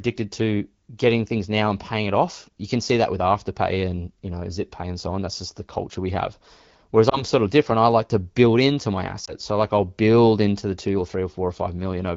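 Lost AMR speech frames hit this speech recording twice, at 7.09 s and 9.25 s, each a single 20 ms frame that failed its radio checksum. The decoder bridged each gap by repeating the last good pitch and vocal-tract settings at reduced gain, so each shows up as a brief dip or warble, lasting to about 7.24 s and 9.34 s as the voice recovers. The wideband coding around them sounds like AMR-WB at about 12.65 kbit/s.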